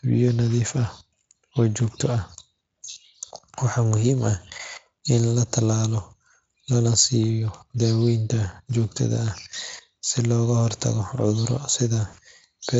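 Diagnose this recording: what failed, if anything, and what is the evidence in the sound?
Two brief glitches in the speech, at 9.71 to 9.76 s just after "siiyo daaweynta joogtada ah" and at 12.07 to 12.15 s, smear into a buzzy tone or a coloured noise that fades. This is VoIP packet loss concealed by the speech codec, a network-stage fault. The gaps, 20 ms and 60 ms, fit one and three lost frames. The Speex decoder extends its last pitch and filter at falling gain, and the speech stays weak for a moment after packets resume.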